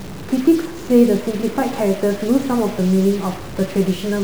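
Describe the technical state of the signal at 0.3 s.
At 0.3 s you're hearing a stuck bit, and it runs through the whole clip. One data bit most likely can't change, so about half the samples land off by a step around -30 dBFS, giving a harsh buzzy edge on the speech and noise in the pauses.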